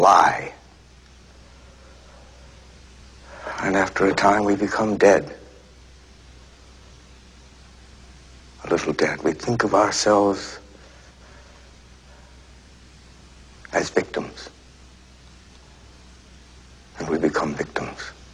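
A single sharp click at 17.22 s is likely dropped samples, roughly one sample missing, so the waveform jumps abruptly to a later value.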